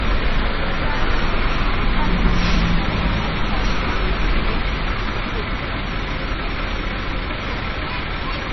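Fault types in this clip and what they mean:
MP3 compression: heavy damage throughout, likely from a low bitrate around 24 kbps, with nothing above 5.9 kHz and a watery, swirly texture; spectrograms show flickering gaps beneath a flat cut-off.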